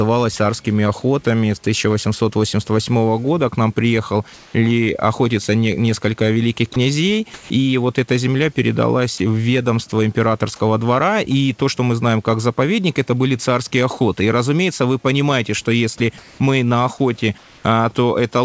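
At 4.34–4.54 s the room background gives way to a steady, featureless hiss, about 1 dB quieter. This is comfort noise in place of the background, likely from discontinuous transmission: with the background about 28 dB below the loudest speech, the sender stopped transmitting and the receiver synthesised noise to fill the gap. At 6.74 s, right after "охотиться не несколько великих", sound is dropped into that same steady hiss for 20 ms. This is sound dropped by the voice detector, likely because it took the sound for background and paused sending. At 7.34–7.50 s synthetic hiss again replaces the background, about 2 dB lower. Brief 20 ms voice-detector dropouts follow at 9.18 s and 9.90 s, the second between "эта земля передалась в" and "императорского двора и то", and another comes at 15.98 s. Comfort noise covers the background at 16.18–16.40 s, about 1 dB quieter, and at 17.38–17.64 s after "мы на охоте", about 2 dB quieter. 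Throughout, the G.722 call path leaves nothing above 8 kHz.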